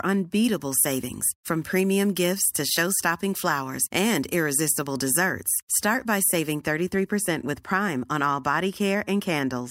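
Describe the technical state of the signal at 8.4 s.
At 8.4 s the speech signal is intact, with no audible technical fault at that moment.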